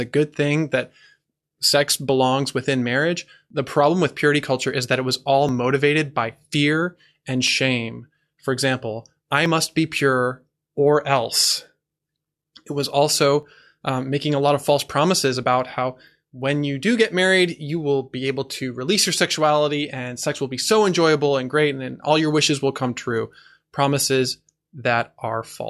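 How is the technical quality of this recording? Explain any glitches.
The recording has one recurring fault: an overlap between stream segments, heard six times at 3.50, 5.49, 7.47, 9.46, 11.44 and 13.43 s, for example right after "that it was all" and after "example I". The events fall about every 2 s, which fits segments of that length. Adjacent segments carried overlapping time stamps, so the player trimmed roughly 10 to 13 ms of audio that was never duplicated. The waveform jumps across the gap, producing a tiny skip.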